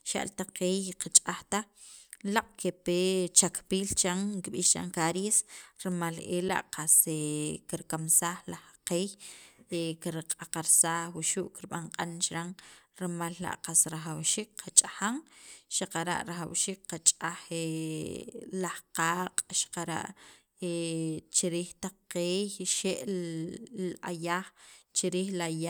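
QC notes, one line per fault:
6.49 s and 16.49 s, gap between chunks: the speech drops out twice into a hard-edged hole about 6.5 ms long, heard as a tiny break rather than a fade. Both holes fall exactly 10.0 s apart, which marks them as joins between 10-second chunks: a slice of silence sits at each boundary where one chunk ends and the next begins. No speech is lost; it is simply interrupted at each seam.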